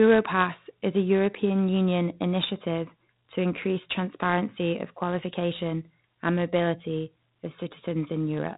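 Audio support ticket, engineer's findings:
Gritty hiss riding every loud syllable, whole clip, worse on sharp onsets where attacks smear and crunch. Classic 4-bit ADPCM compression, heavy damage here: each sample coded as a coarse step off a prediction, step size lagging behind fast transients. Dull top end too, nothing above 3.8 kHz, which fits an 8 kHz sample rate at 32 kbps. Probable culprit: legacy voice codec stage in the capture or transport chain.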